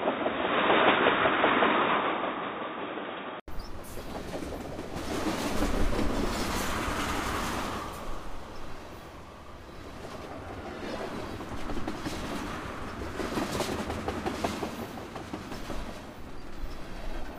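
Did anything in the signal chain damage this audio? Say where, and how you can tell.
Yes. At capture, the input was likely switched to a poorer device. From 0 to 3.48 s nothing reaches above 3.8 kHz, so the sound is dull and boxy with faint background noise about 50 dB down. After an 80 ms gap it opens up, with no real level jump.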